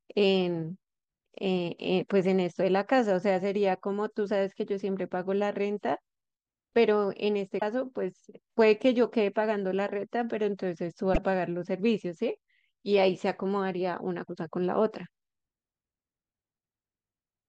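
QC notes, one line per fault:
7.57–7.63 s, 11.10–11.18 s and 14.25–14.30 s: damaged data in a compressed stream. Each 50–80 ms burst is a short glitch in the speech where the decoder misread corrupted frames and lost sync before recovering. On a spectrogram it appears as a brief broadband smear, and on the waveform as an abrupt discontinuity.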